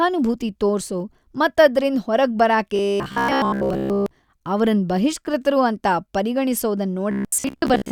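Robotic sound from repeated short buffers occurs at 2.76 to 4.12 s, between "ಮತ್ ಅದ್ರಿಂದ ಹೊರಗ್ ಬರಾಕೆ" and "ಅವರನ್ ಬಹಿಷ್ಕೃತರು ಅಂತ", and again at 7.11 to 7.91 s. Audio likely arrived too slowly, so roughly 15 ms fragments were looped over most of each stretch, which forces a rigid, metallic 66.8 Hz buzz onto the speech.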